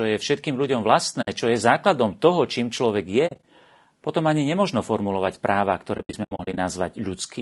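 It's a speech clip, and the whole thing has the rough, grainy texture of low-delay AAC compression, likely AAC-ELD running at a low rate, something around 32 kbps judging by how plainly the damage comes through. At that low rate the coder can't spend enough bits on the spectrum, so you get a noisy fill between the pitch harmonics and a top end that sounds thinned and a bit synthetic. On top of that there are three spots of AAC frame loss with muting, where chunks of signal simply drop to silence with soft fades at the edges. The first is a clean 60 ms hole from 1.21 to 1.28 s, right after "je všetkým ľuďom" and before "čo je základom toho". The second, from 3.27 to 3.42 s after "toho čím človek je", is broken up into several small gaps, the longest around 40 ms. The worst is from 5.97 to 6.58 s after "nemožno formulovať práva ktoré", where about 320 ms goes missing in scattered bits, the longest run around 70 ms.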